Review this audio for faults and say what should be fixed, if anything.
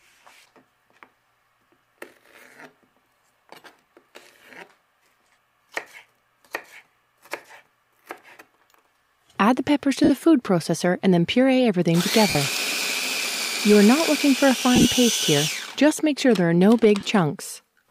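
Lost LE Audio frames at 10.04, 12.30, 14.76 and 17.00 s, each about 50 to 60 ms, the last two scattered over 90 ms. The decoder repeats the last spectrum with random signs, so tones smear into noise instead of clicking or dropping out as with plain dropouts. Improve link robustness with better antenna placement, less interference or retransmission headroom.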